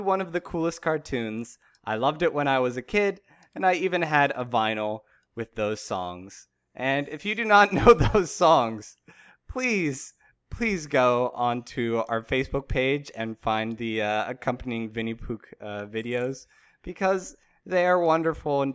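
No technical faults are audible anywhere in the recording.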